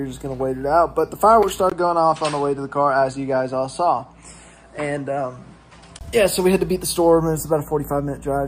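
At 1.42 to 1.46 s a corrupt frame decoded puts a sharp, loud blip over a couple of frames: damaged bits sent energy to the wrong frequencies. On a spectrogram it is a thin vertical smear of misplaced energy, and on the waveform a brief spike.

From 1.70 to 6.01 s the sound turns duller, likely because the input switched to a poorer device. A 20 ms gap marks the switch, shown as a flat line on the waveform. The spectrogram goes empty above 9.9 kHz, a faint new noise floor sits well below the signal, and the level stays about the same.

At 7.37 to 7.41 s a second corrupt frame decoded gives a quieter chirp spread over a few frames. It shows as another short, stray patch on the spectrogram.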